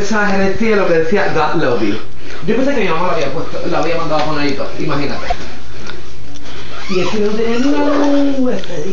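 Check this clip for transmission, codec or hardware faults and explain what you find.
One fault stands out. From 5.29 to 5.32 s there is a broken MP3 bit reservoir, likely the cause of a 30 ms disruption where the sound jumps ahead. That span is roughly one 26.1 ms MP3 frame. Once frames are lost, the next frame reaches back for borrowed bits and decodes another frame's bytes instead, corrupting the audio until decoding resynchronises.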